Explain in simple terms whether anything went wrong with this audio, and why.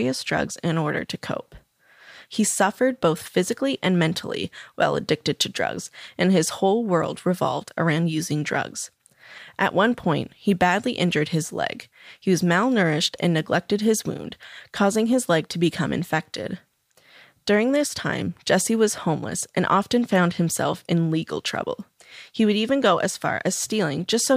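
Nothing went wrong with this speech recording. No technical fault can be heard anywhere in it, so there is nothing to explain or fix.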